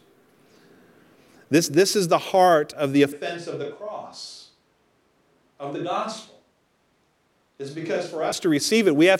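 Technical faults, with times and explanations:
3.13–8.32 s, switch to a distant microphone: Right after "the heart of the", the voice turns suddenly roomy and hollow, with thinner bass. The level drops by about 10 dB. Room noise becomes audible, roughly 35 dB below the speech. The likely cause is that the close microphone dropped out and a farther one took over. That microphone picks up more reflections and room sound than direct voice. The close sound returns just as abruptly at 8.32 s.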